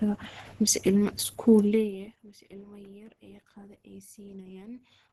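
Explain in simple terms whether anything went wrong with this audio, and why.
Opus compression affects the speech throughout. It sounds hoarse, grainy and muffled, with nothing above about 12.1 kHz. The likely cause is Opus squeezed very hard into its speech-oriented hybrid mode, which trims the top end and roughens detail to save data.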